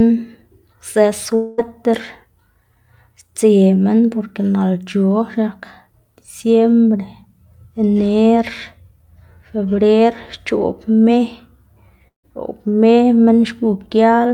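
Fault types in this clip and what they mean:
Long network dropout: the sound breaks off at 1.35 s and 12.08 s, likely because packets stopped arriving. The receiver smears the last sound into a fading buzz for about 0.2 s, fading to silence the second time, and resumes with roughly 0.2 s lost.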